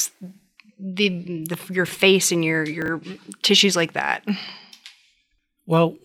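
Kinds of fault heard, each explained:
Chunks out of order: A block of speech plays after the blocks meant to follow it. Nothing is lost, but three hard joins result. At 1.86 s a 20 ms chunk lands one place late. At 2.82 s one lands two places late. Each is a brief jumbled moment.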